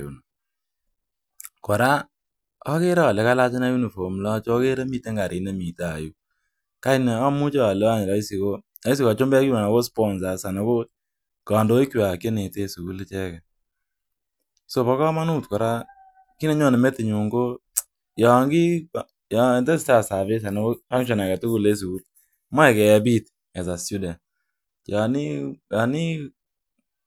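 Speech with no audible faults.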